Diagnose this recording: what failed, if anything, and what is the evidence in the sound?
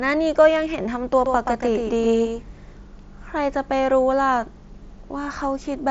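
A doubled audio track appears from 1.26 s to 2.76 s, most likely from the speech being captured a second time through a slower path and mixed back in, or from an edit holding two copies out of step. A full-band duplicate trails the original by roughly 150 ms at about 5 dB lower, with no decay or room colour, so it sounds like a hard slapback. It cuts in and out abruptly at both ends.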